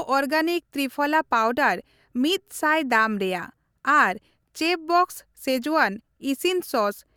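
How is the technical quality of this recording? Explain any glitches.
No audible glitches or faults.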